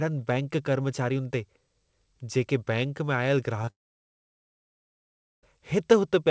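Short concealed packet loss hits right after "में आयल", from 3.62 to 3.64 s and again from 3.65 to 3.68 s. Two small gaps of 10 ms and 20 ms of audio arrived too late. Each was bridged by extending the preceding sound, leaving a brief smear or wobble.

From 3.70 to 5.44 s, the sound continues for a moment as a fading buzz or hiss, then drops to silence for about 1.7 s before the audio resumes with that stretch gone. This is likely a long network dropout, with the receiver stretching the last sound and then giving up. The call path's band limit also leaves nothing above 8 kHz.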